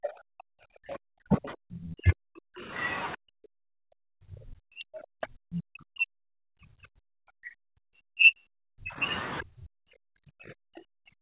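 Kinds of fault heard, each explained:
Speech suppressed in double talk: the talker's speech repeatedly drops away, by around 40 dB at its deepest, over a few seconds at the start, most of the middle and again at the end, likely because the echo canceller could not separate near speech from loudspeaker echo and attenuated both.
Other side's voice leaking through: short scraps of a second voice sit about 15 to 25 dB below the main speech, near 0.03, 0.89, 1.72, 2.81 and 5.55 s, likely residual loudspeaker echo that the canceller left in the microphone signal.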